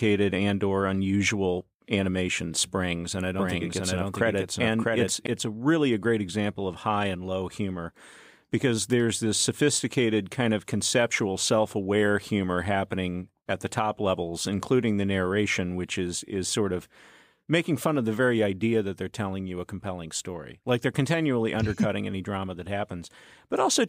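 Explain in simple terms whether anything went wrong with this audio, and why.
A doubled audio track appears from 3.39 to 5.27 s, after "animation springs and I". An equally loud copy trails about seven-tenths of a second behind, likely from a second, slower recording path.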